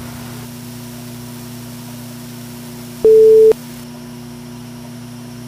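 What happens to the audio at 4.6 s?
Nothing goes wrong at 4.6 s: the audio plays through that moment intact, with no dropout, click or distortion.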